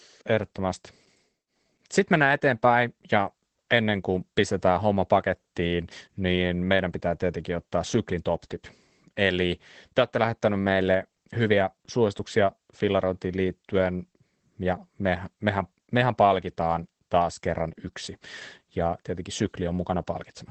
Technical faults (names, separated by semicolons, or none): Opus voice compression